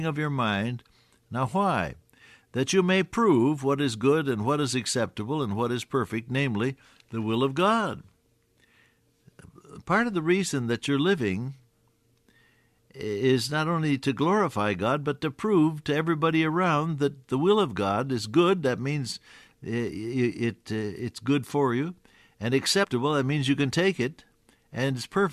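At 22.83 to 22.85 s, compressed frames are skipped. About 50 ms of speech goes missing, likely two 23.2 ms frames, so the speech jumps ahead.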